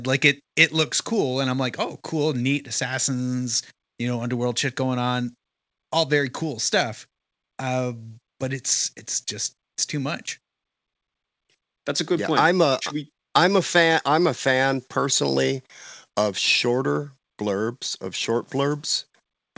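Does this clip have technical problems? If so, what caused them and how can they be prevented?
No technical problems are audible.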